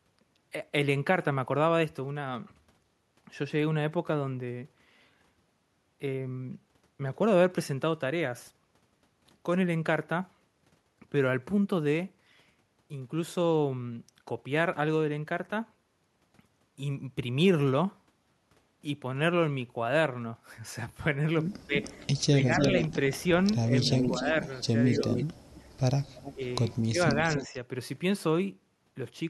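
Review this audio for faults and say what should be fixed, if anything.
Speech suppressed in double talk occurs at 21.66–21.74, 22.32–22.49, 23.71–24.19, 24.99–25.06 and 26.34–27.56 s. The speech dips by roughly 5 dB in the middle three, about 20 dB in the first and about 25 dB in the last. This likely comes from an echo canceller attenuating its own talker along with the loudspeaker echo while both sides talk. A canceller with proper double-talk detection, rather than blanket gain reduction, would prevent it.

Echo leak appears from 21.82 to 25.63 s and again from 26.16 to 27.58 s as a delayed copy of the speech trailing by 290 ms. The copy is strong, only about 5 dB below the speech, in the first stretch, and about 15 dB down in the second. The likely cause is a loudspeaker-side echo canceller letting residual pickup through. Better canceller convergence, or a headset on that end, would prevent it.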